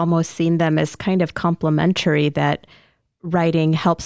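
No technical faults can be heard anywhere in the speech.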